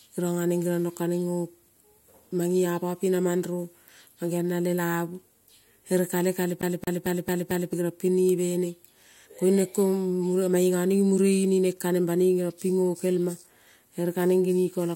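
From 6.61 to 7.73 s the speech stutters, repeating a 223 ms fragment five times with brief mutes between: a CD stuck on one turn, its laser thrown back each revolution.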